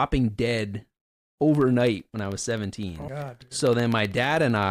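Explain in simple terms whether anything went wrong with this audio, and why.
Something did go wrong. From 1.49 s to 4.63 s the speech carries a steady ticking, repeating every 64 ms, about fifty ticks in all. These are periodic USB or driver dropouts. A background task briefly stalls the USB link or the audio driver on a fixed schedule, and each time a tiny fraction of a millisecond of sound is replaced by silence. Those regular gaps are heard as ticks, and only while someone is talking.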